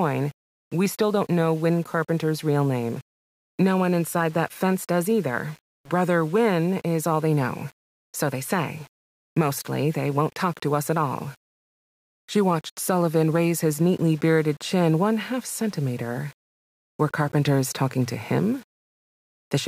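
Speech, with low bit depth without dither audible from start to finish, likely from rounding the samples to about 7 bits. Because no dither was added, the rounding error follows the signal. It sits roughly 30 dB below it, heard as grainy distortion on quiet passages or a near-steady hiss. Sound below one step drops to silence or sputters between two levels. A waveform shows visible stair-stepping, and a spectrogram shows a signal-dependent noise haze spread across the band.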